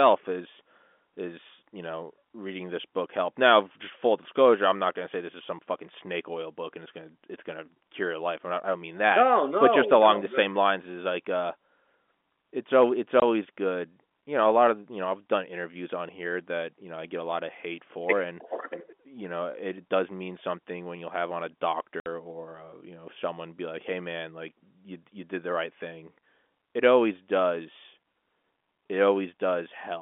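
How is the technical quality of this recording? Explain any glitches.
Two short dropouts interrupt the speech, which arrives over a G.711 telephone line limited to roughly 250 Hz to 3.5 kHz.

Packet loss filled with silence, at 13.20–13.22 s and 22.00–22.06 s. Audio packets went missing and silence replaced them, leaving a 20 ms hole just before "good you know a" and a 60 ms hole between "you'll have on a" and "or uh you know". These lengths fit one and three 20 ms packets. Each gap has abrupt edges.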